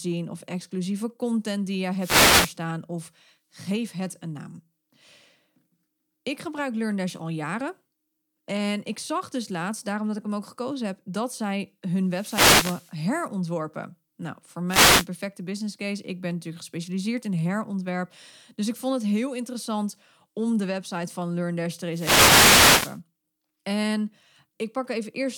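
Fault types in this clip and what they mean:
Wireless microphone noise hit: the FM radio link fades as reflections cancel, so receiver noise rises and four bursts of static swish over the speech.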